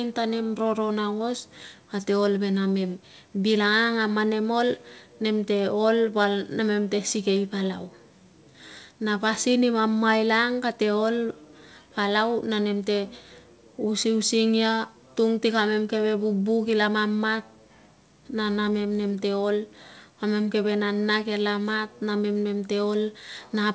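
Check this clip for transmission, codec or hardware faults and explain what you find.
No transmission, codec or hardware faults can be heard in this speech clip. It has come through a call path, and the audio stops at 8 kHz, which fits a wideband codec such as G.722.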